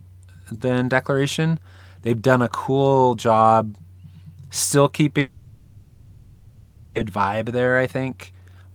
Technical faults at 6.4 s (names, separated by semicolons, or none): long network dropout